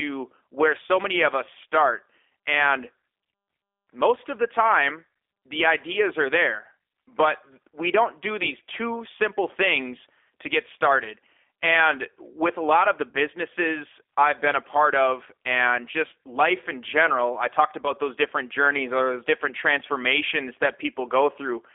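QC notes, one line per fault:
Throughout: G.729 codec. The audio sounds rebuilt rather than recorded. Each 10 ms frame is resynthesised from a vocal tract filter, a pitch predictor and a few coded pulses, which gives the plainly audible rough, slightly synthetic edge and fits the 8 kbit/s G.729A coder. The line band runs about 300 Hz to 3.5 kHz, so there is no low body and no air above it.
13.10–13.15 and 17.82–17.93: VoIP packet loss concealed by the speech codec. After "a lot of the", about 40 ms of audio goes missing, which fits two lost packets. After "in general I talked", and before "those different journeys or", about 20 ms goes missing, which fits one. At each gap the decoder stretches its last pitch and filter into a fading buzzy tone or coloured noise. Because every frame builds on the one before, the sound stays weak and smeared after the gap, so the disturbance outlasts the loss itself.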